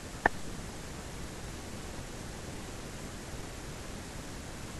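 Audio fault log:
throughout, doubled audio track: the speech is heard twice, a second full-band copy trailing about a second behind at roughly the same loudness, dry with no decay or room colour. This likely comes from the audio being captured again through a slower path and mixed in.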